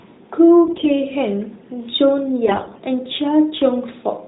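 From 0.66 to 0.89 s, and again from 2.46 to 2.80 s, AMR bit errors corrupt the narrowband mobile stream. Flipped bits in the weakly protected parts of each frame slip past the checksum, so the excitation pulses land in the wrong places and the fine pitch, gain and spectral values drift. The speech keeps its rough pitch and loudness but turns hoarse, scratchy and gargly. The second burst, with a higher error rate, is the harsher of the two.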